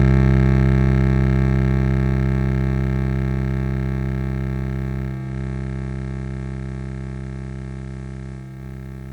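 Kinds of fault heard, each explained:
Digital radio blending to analogue: at 5.06 s the receiver loses the digital stream and fades over 326 ms to the station's FM feed, so faint hiss comes in underneath, then it blends back at 8.66 s.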